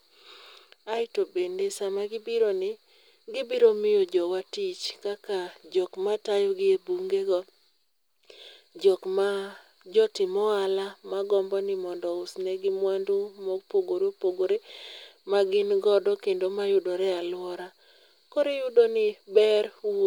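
Nothing in this speech recording stands out as a technical problem; there's no point where anything goes wrong with the audio.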